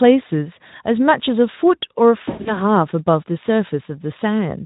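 From 2.25 to 2.62 s the speech smears into a buzzy tone or coloured noise that fades, and stays thin just after. This is VoIP packet loss concealed by the speech codec: about 160 ms went missing across 200 ms, the longest gap 100 ms, and the Speex decoder extrapolated its last pitch and filter with falling gain.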